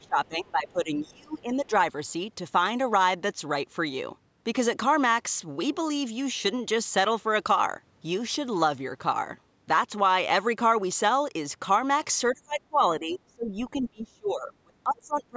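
Speech suppressed in double talk, 0 to 1.72 s, 12.33 to 12.81 s, 12.99 to 13.6 s and 13.79 s to the end: the speech dips by roughly 25 to 35 dB, likely because the echo canceller mistook it for loudspeaker echo while both sides talked.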